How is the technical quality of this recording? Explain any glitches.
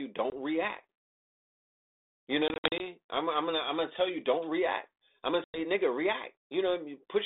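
The recording has three dropouts, all from packet loss on an ADPCM call, heard through a narrow telephone band that tops out near 3.7 kHz and fits G.726 at 32 kbit/s. At 0.30 s about 20 ms vanishes. From 2.48 to 2.82 s about 160 ms goes missing in scattered bursts, the longest around 60 ms. At 5.44 to 5.62 s roughly 100 ms drops. Lost packets become hard-edged silence, and the decoder's predictor and step size drift from the sender's, so the sound comes back clicky, slightly distorted or at the wrong level before settling.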